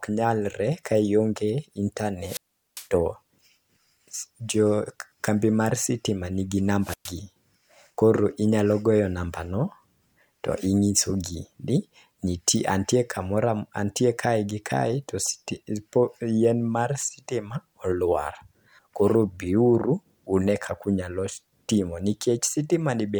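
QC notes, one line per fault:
2.22–2.88 s, wireless microphone squelch dropout: static rises as the FM radio signal fades, then the receiver's squelch cuts the output to near silence for about 0.40 s before the speech returns.
6.81–7.15 s, wireless microphone squelch dropout: right after "kambi mar sitima nigi" the link weakens again, and a brief hiss is followed by a shorter squelch mute of about 0.12 s before the signal recovers.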